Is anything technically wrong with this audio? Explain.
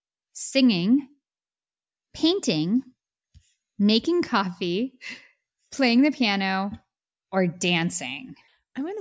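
No, nothing technically wrong stood out on listening to this speech recording.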